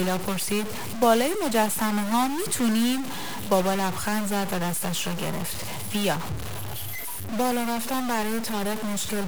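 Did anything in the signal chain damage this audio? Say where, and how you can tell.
Yes. From start to finish the speech carries a harsh, buzzy distortion riding on every sound, and the pauses are not clean but filled with a gritty noise floor that tracks the waveform. That points to a stuck bit, likely at the converter or on a data line feeding it. One bit held fixed pushes about half the samples off by its weight, here about -30 dBFS, and the error flips with the sign of quiet passages, so silence turns noisy.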